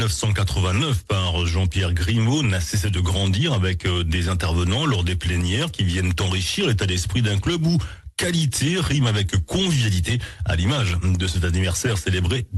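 No technical faults are audible.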